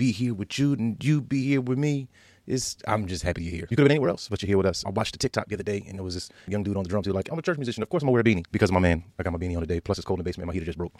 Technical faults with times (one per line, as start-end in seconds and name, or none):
3.24-11.00 time-stretched section